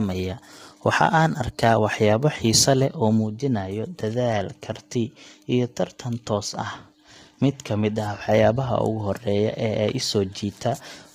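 Throughout, the speech sounds rough and grainy, with noise between harmonics and a lowered or synthetic top band, likely heavy low-delay AAC compression fitting roughly 24 kbps.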